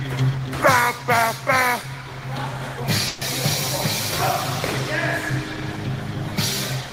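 Delayed packets likely emptied the jitter buffer at 3.07 to 3.23 s, causing a call audio freeze: a fading buzz or hiss bridges 140 ms, then sound resumes unbroken, 140 ms late.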